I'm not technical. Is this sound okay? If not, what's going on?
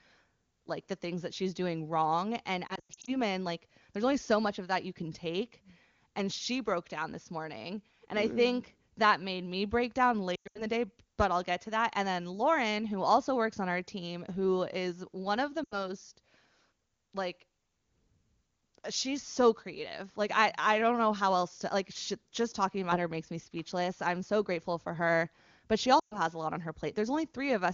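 No. There are lost AMR speech frames at 2.68–3.16 s, 10.35–10.65 s, 15.64–15.91 s and 25.99–26.19 s. Pieces of the call went missing. The phone stretched the last sound and faded it, so speech briefly warbles or drops out.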